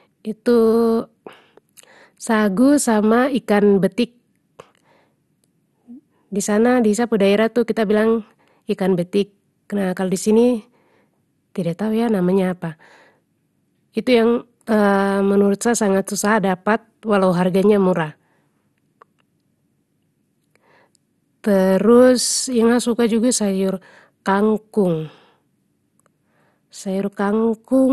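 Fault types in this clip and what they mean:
MP2 compression, throughout: dull, granular, gurgling speech with nothing above 12.2 kHz, likely Layer II sub-band coding switching off upper bands, fitting a 64 kbps rate.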